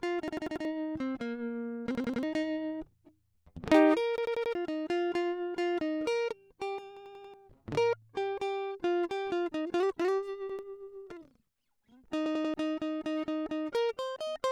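Repeated buffer at 0.28–0.65, 1.95–2.23, 4.18–4.55, 6.97–7.34, 10.50–10.59 and 12.26–12.54 s: late data makes the music stutter on one 93 ms fragment, which fits a 4096-sample buffer. Unlike a dropout, it repeats sound rather than going silent.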